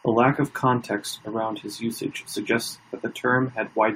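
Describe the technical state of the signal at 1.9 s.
Timecode bleed is present at 1.9 s, as it is across the whole clip. Linear timecode from an adjacent track or cable has leaked into the speech path. Its square wave flips between two frequencies near 1 and 2 kHz as the code bits change, and the pattern repeats at a rate that points to 23.976 fps timecode. It sits roughly 30 dB beneath the speech and is heard as a steady chirping warble behind it.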